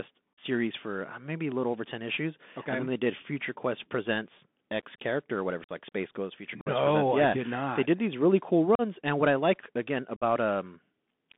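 From start to finish the speech passes through the Bluetooth CVSD headset codec, a one-bit delta coder running at 64 kbit/s, confined to roughly 200 Hz to 3.6 kHz. Unlike plain telephone band-limiting, its adaptive step audibly lags loud high sounds, making s sounds scratchy over a granular hiss.

Unconcealed Bluetooth headset packet loss then punches short, hard-edged holes: 0.34 s (45 ms, just before "for uh maybe a"), 5.64 s (49 ms, after "character or whatever"), 6.61 s (49 ms), 8.75 s (38 ms, between "did these really cool" and "and what I like"), and 10.16 s (53 ms). Each hole fits a run of some ten to fifteen lost voice packets. Nothing is smoothed or repeated across the gaps, which can click at their edges, and the speech returns briefly quieter.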